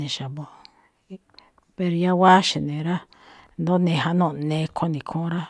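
Nothing technical goes wrong anywhere in this bit of speech, so there's no fault to point out here.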